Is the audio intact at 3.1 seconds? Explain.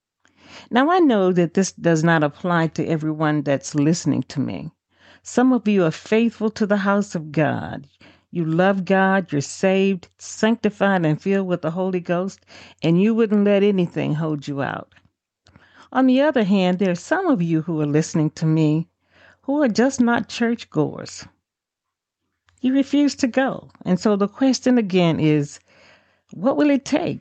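Yes, the audio is intact at 3.1 seconds, with nothing there beyond the band-limited, lightly coded sound of the call path it passed through.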